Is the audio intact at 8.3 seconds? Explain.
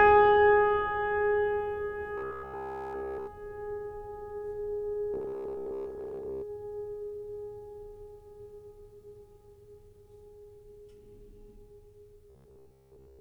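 Yes, the music plays through 8.3 seconds without any dropout, click, distortion or other disruption, so the audio is intact at that moment.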